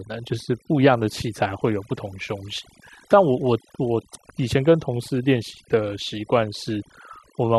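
Overdone noise removal runs throughout the speech: bands near the noise estimate are cut away, leaving twinkling specks in near-silent gaps.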